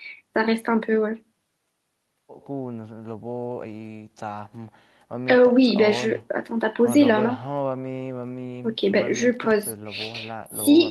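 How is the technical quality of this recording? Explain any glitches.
No glitches to explain: nothing in the recording points to a technical fault.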